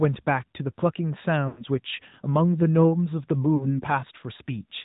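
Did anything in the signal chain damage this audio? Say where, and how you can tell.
Yes. Throughout, the speech sounds muffled, with nothing above 4 kHz, and has a plainly audible buzzy, synthetic edge. This is the codec stage: the AMR narrowband mobile codec, running at a mid rate that fits AMR-NB at about 10.2 kbps, rebuilds speech from a coarse vocal-tract model and sparse pulses.

At 1.48 to 1.64 s the sound smears, stretches and sags toward silence, then returns rough. At 3.56 to 3.81 s there is a shorter warble and dip. These are lost AMR speech frames on the radio link: about 100 ms and 40 ms failed their checks, fitting five and two 20 ms frames, and the decoder concealed them by repeating the last good settings at fading gain.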